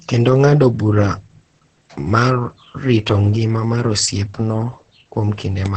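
Right from the start and all the way through, the speech carries heavy Opus voice compression. There's essentially nothing above 8.6 kHz, so the top end is gone and the voice sounds muffled. The excitation is coded coarsely, which gives it a hoarse, faintly robotic edge. That band limit and the level of damage point to the SILK coder running wideband at a very low bitrate, something like 10 kbps.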